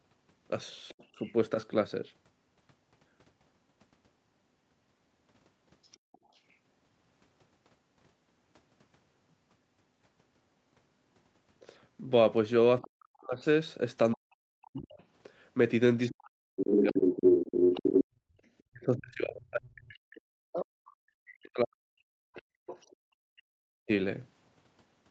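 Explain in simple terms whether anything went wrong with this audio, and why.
The echo canceller likely failed to fully remove the far end's loudspeaker sound from the microphone, so the other side's voice leaks through. It is a faint trace at 0.88–1.33 s, 5.83–6.54 s, 12.82–12.87 s and 22.36–22.96 s, and roughly as loud as the talker from 15.01 to 20.65 s.

Speech is suppressed in double talk: with both sides talking at once, the canceller likely couldn't tell its own talker from the echo and turned everything down. Between 12.81 and 17.11 s (about two seconds in all) and between 18.7 and 23.9 s (about four seconds), the talker's voice drops sharply, sometimes nearly to silence.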